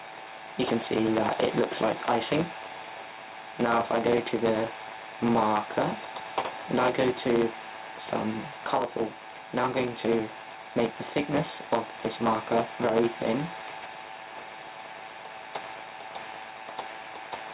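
A block size mismatch (truncated) runs throughout: a 100 Hz buzz and 1.07 times speed, fitting 512-sample blocks cut short, with vertical seams on a spectrogram. Gain pumping also persists: the gain swings about 5 dB, likely over-high gain into a fast limiter; the waveform envelope looks flattened.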